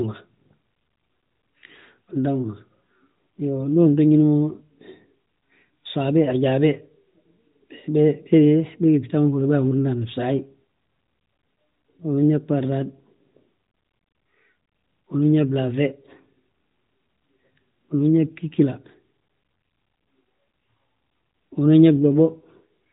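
Speech, band-limited to nothing above 3.8 kHz as expected of the AMR narrowband mobile codec it passes through, with no technical faults.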